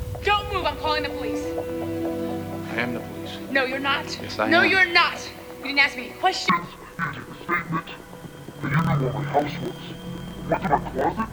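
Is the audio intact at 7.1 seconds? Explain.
No. At 7.1 seconds the sound drops a full octave and comes out doubled and choppy, with its blocks cycling about 38 times a second. This is interleaved audio read as planar, running from 6.49 s to 11.33 s. Each block of about 26 ms holds alternating left and right samples, but it is read as if its first half were left and its second half right. Both halves therefore play together at half speed, giving the octave drop.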